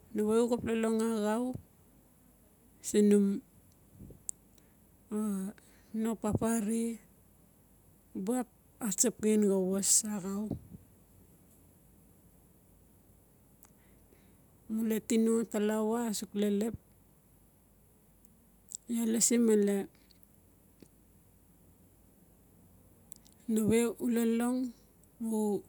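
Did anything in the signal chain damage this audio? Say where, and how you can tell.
No, nothing in this speech recording stood out on listening as damage introduced anywhere along the signal chain.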